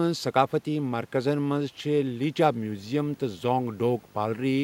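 A speech recording picks up video or display buzz from 2.61 s through to the end at 4.64 s, where a screen or video cable couples into the audio path. It is a 50 Hz field-rate buzz with hash above it, plus a whine at 15.6 kHz from the line scan, sitting roughly 30 dB under the speech and about 5 dB above the room noise. A spectrogram shows stacked 50 Hz harmonics and a thin line at 15.6 kHz, both starting at 2.61 s.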